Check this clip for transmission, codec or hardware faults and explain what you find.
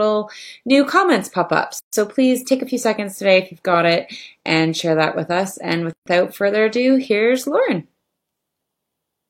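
Two dropouts break this speech clip, both a gap at a join of encoded pieces. The first runs from 1.79 to 1.93 s (about 141 ms), right after "new comments pop up" and before "please take a few". The second runs from 5.93 to 6.06 s (about 133 ms), just before "further ado here's". They sit 4.0 s apart, which fits fixed-length segments encoded one at a time and then concatenated. Each encoder pass leaves its leading delay and its padded final frame in place, so silence is inserted mid-utterance and the speech then resumes exactly where it stopped. On a waveform each one is a flat, near-zero stretch with smeared edges. On a spectrogram it is a clean vertical blank band across all frequencies, its borders slightly blurred by the codec.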